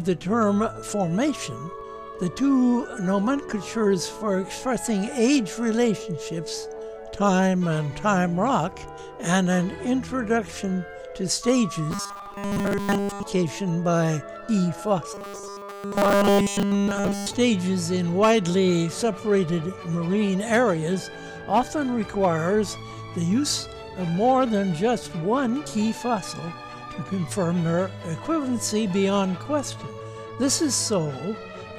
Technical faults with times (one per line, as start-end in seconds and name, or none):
11.91-13.23 robotic sound from repeated short buffers
15.14-17.34 robotic sound from repeated short buffers